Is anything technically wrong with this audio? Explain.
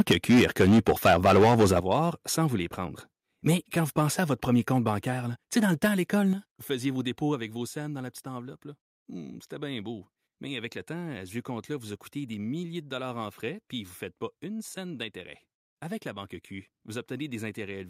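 Yes. From 0.0 to 1.93 s there is microphone overload: the signal runs about 10 dB past the converter's limit, and roughly a sixth of samples are flattened, likely from excessive input gain, giving crackling distortion.

The microphone volume is stepped down three times: about 8 dB at 1.8 s, just before "sans vous les prendre"; about 6 dB at 6.33 s, before "vous faisiez vos dépôts"; and about 3 dB at 7.35 s, before "avec vos scènes dans". Voice and background drop together each time, likely because the call software reduced the device input level.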